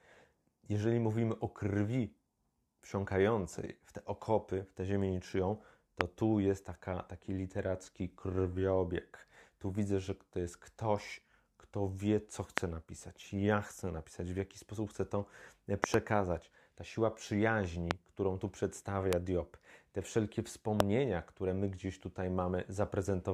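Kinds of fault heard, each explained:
Loud pop: sharp thumps far louder than the speech, one of them a double, likely voltage spikes from a switch or static; unlike dropouts, speech continues underneath.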